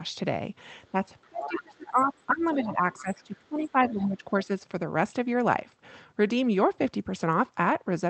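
At 0.92 s the talker's level dips briefly, by only a few decibels, for well under a tenth of a second. This is a first touch of speech suppressed in double talk. From 1.29 s to 4.24 s it returns much more strongly: the voice is pushed down by roughly 20 dB in repeated stretches, about two seconds in total. The likely cause is an echo canceller that could not separate the near talker from the loudspeaker echo while both sides spoke, so it attenuated everything. Unlike packet loss, the gaps are not clean drops or glitches.

Overlapping this, the other side's voice is leaking through. A second voice appears at 1.22 to 1.62 s, around 10 dB under the talker. Brief scraps follow at 1.99 s, 2.4 s and 2.64 s, each quieter than that first one. A longer patch comes at 2.98 to 3.38 s. These fragments likely come from residual loudspeaker echo that the canceller left in the microphone signal. Unlike a genuine second person in the room, they mostly fall within the stretch where the suppression bites.

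The whole clip also carries the band limit of the call path, with nothing above about 8 kHz.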